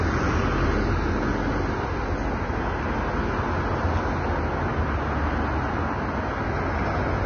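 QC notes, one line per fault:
Throughout, Vorbis compression: the top end simply stops at about 6.5 kHz, and what's left of the treble has turned hissy and grainy, with tones sounding roughened and attacks smeared. That's likely a low-quality Vorbis encode, probably somewhere near 20 kbps. At that rate the encoder pulls the cut-off down and quantises the upper residue so coarsely that the fine detail gets swapped for noise of roughly the same energy. The damage is heavy.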